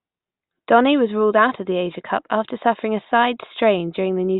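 A short speech recording with nothing technically amiss to pick out anywhere along its run.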